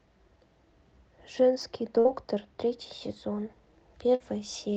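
From 1.62 s to 3.49 s the speech takes on channel delay (comb filtering). One channel runs behind the other by only a couple of samples, around 0.04 ms, and when the two are summed to mono the shared content cancels where the delay equals half a cycle. With a delay that short, the first notch lands near 10 kHz and the next ones sit above hearing. The passage therefore sounds dull rather than deeply hollow, losing its upper air and sibilance detail for that stretch.

Inside that stretch, at 1.99 s to 2.08 s, comes the first burst of packet loss. About 60 ms of audio failed to arrive in time, and the receiver filled a gap of roughly 53 ms by extending the last sound while fading it. That produces a brief held buzz or decaying hiss, after which the speech jumps ahead with that segment gone. The same fault recurs at 4.15 s to 4.23 s, again with about 60 ms missing, a gap of about 51 ms concealed, and the same smeared, clipped-off join.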